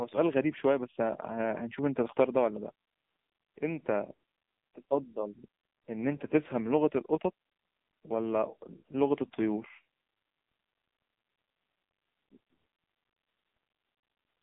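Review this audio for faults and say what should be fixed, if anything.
The whole recording has gone through the AMR narrowband mobile codec, start to finish. Everything above roughly 3.8 kHz is gone and the low end thins out below about 200 Hz, so the speech sits in a narrow phone-line band. AMR-NB rebuilds the voice from a vocal-tract model fed with a sparse pulse pattern, and at this damage level it sounds buzzy and synthetic, which fits one of the lower modes, around 6.7 kbps. To prevent it, capture or source the audio directly rather than from a mobile call, or use a wideband codec at a higher bitrate.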